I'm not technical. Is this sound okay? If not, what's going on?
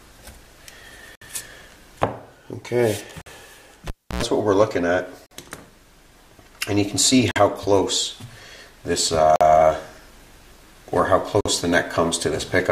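No. There are two problems.

The first is a gap at a join of encoded pieces. The sound drops out briefly six times: at 1.15, 3.22, 5.26, 7.31, 9.36 and 11.41 seconds, once every 2 seconds. The first gap lasts about 62 milliseconds and the rest about 48. The audio was saved as separate chunks and stuck back together. Each chunk kept a sliver of silence at its edges, so you hear a short hole before the sound carries on where it left off.

The second is a cable pulled and plugged in, from 3.87 to 4.23 seconds. There's a pop, then about 300 milliseconds of near silence while the cable is out. Next comes roughly a tenth of a second of low 60 Hz buzz from the mains power as the plug's tip touches first, and a second pop as the connection seats and the sound comes back.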